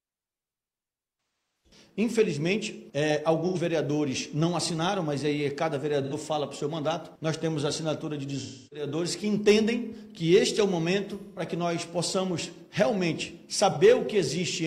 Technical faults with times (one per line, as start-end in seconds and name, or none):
1.65 AAC frame loss with concealment
3.47-3.57 AAC frame loss with concealment
6.02-6.13 AAC frame loss with concealment
8.41-8.86 AAC frame loss with concealment
11.18-11.42 AAC frame loss with concealment
13.70-13.77 AAC frame loss with concealment